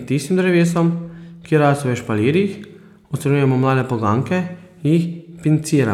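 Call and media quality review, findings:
No faults found in the speech. Nothing here needs a ticket entry.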